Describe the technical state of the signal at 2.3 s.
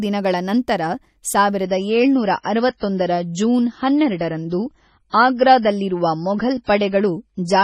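At 2.3 s the speech is inside a stretch where the adaptive stream has switched to a lower bitrate, running from 1.64 s to the end of the clip. When the connection slowed, the player swapped to a cheaper encoding with no gap. The quality change is abrupt, which fits MP3 dropping from around 128 kbit/s to about 24 kbit/s. Nothing is left above 10.1 kHz, so the treble sounds dull, and coding artefacts are more audible.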